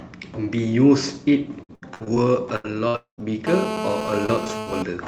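Repeated packet loss (robotic sound) runs from 1.63 to 2.18 s: five short gaps, the longest 72 ms, each patched by extending the previous sound, leaving choppy speech with pieces missing.

A burst of packet loss at 2.56 to 2.66 s, and another at 2.88 to 2.96 s, drops about 80 ms and 60 ms of audio. The receiver extends the last sound as a fading buzz or hiss before the speech resumes further on.

From 2.96 to 3.20 s the concealed sound fades into about 110 ms of silence, and roughly 220 ms of speech never returns, likely a long network dropout.

GSM phone buzz sits from 3.47 to 4.82 s. A nearby 2G phone on a call transmits 217 bursts per second, which the audio circuit rectifies into a steady, raspy 217 Hz buzz at about 5 dB below the speech.

Repeated packet loss returns from 4.26 to 4.68 s under that buzz, with four gaps up to 78 ms long concealing about 120 ms and again giving a choppy, broken texture.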